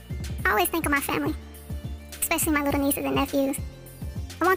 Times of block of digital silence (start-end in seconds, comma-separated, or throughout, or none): none